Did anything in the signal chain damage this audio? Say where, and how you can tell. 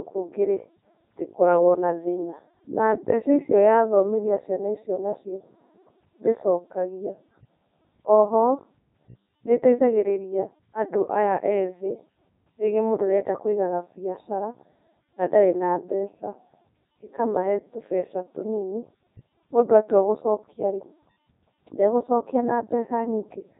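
Yes. The damage is at the codec stage, and it runs through the whole clip. This is the Codec 2 vocoder, and the damage is heavy. The speech sounds robotic and buzzy from start to finish, and nothing is left above about 3.8 kHz. The codec sends no waveform. It sends only pitch, voicing, energy and a rough spectral outline. The decoder then rebuilds the voice from sine waves. The quality fits Codec 2's top 3.2 kbit/s mode.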